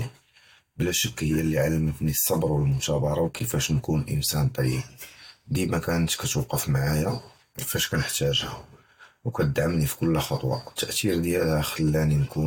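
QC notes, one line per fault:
Nothing stood out on listening to the speech in this clip.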